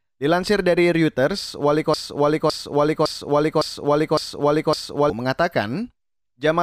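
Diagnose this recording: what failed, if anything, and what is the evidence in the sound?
The speech hits a broken-record loop from 1.94 s to 5.10 s: a 0.56 s slice repeats back to back six times, identical each pass. That's likely a stalled player or stream re-sending its last buffered fragment, so the real audio for those three seconds is gone.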